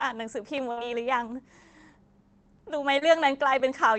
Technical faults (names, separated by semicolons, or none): burst of packet loss; overlapping chunks; short concealed packet loss